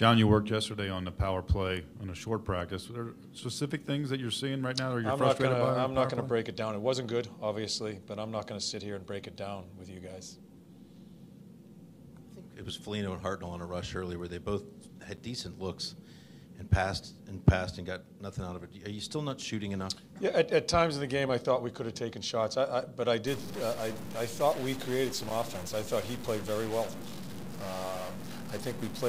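From 23.27 s to the end, the audio takes on a harsh, buzzy distortion that follows the waveform, and quieter passages fill with a noise floor that tracks the signal's sign changes. This is likely a stuck bit, one data line held at a fixed value, so about half the samples are offset by that bit's weight. The error step sits at around -40 dBFS, which points to a fairly high-order bit.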